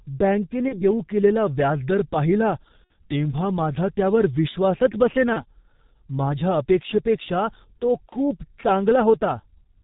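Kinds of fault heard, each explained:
G.723.1 codec: heavy low-rate coding, consistent with about 6.3 kbit/s, leaving the speech muffled and hoarse, band-limited below 4 kHz, with smeared consonants.
VoIP packet loss concealed by the speech codec: four brief dropouts, near 0.68, 2.84, 5.33 and 8.10 s, filled by buzzy or noisy, fading extrapolated sound that lingers briefly afterward.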